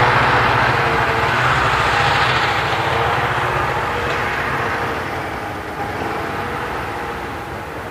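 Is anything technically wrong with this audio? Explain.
No, nothing in the signal points to a technical problem; level, continuity and timing all hold steady throughout.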